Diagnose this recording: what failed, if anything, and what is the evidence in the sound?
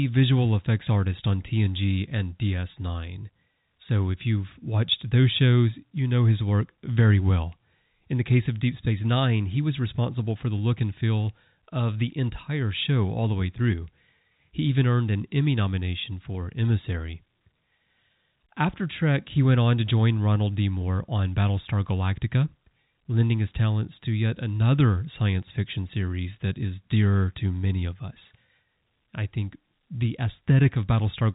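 Nothing failed; the speech carries no audible faults.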